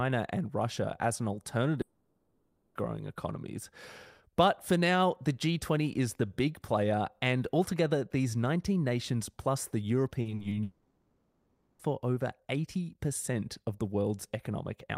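Right after "as an", from 1.81 to 2.77 s, the speech turns into a smeared, buzzy continuation of the last sound that carries across the whole 0.94 s rather than falling to silence. Speech then resumes with that stretch simply absent. This is a long network dropout: no audio likely arrived for nearly a second, and the receiver filled the hole by extending what it had.

After "nations plus the", from 10.21 to 10.53 s, the speech goes choppy. Four short holes, the longest 40 ms and 120 ms in all, are each patched with repeated sound, so about 37% of that span is filler. This is repeated packet loss producing robotic sound, with losses arriving in quick succession.

Almost immediately, from 10.63 to 11.81 s, what is likely a second long network dropout follows. The same fading buzz stands in for 1.16 s of missing speech with no true silence, and the audio picks up again further on without the lost part.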